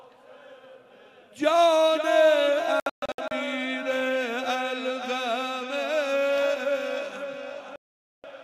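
A digital broadcast dropout occurs twice: the receiver lost valid frames and muted. From 2.80 to 3.32 s the sound breaks into several short holes totalling 320 ms, the longest 128 ms; from 7.76 to 8.24 s it goes silent for about 480 ms, and that material is simply gone.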